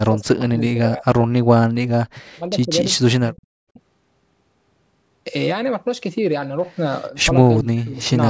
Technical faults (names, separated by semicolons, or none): speech suppressed in double talk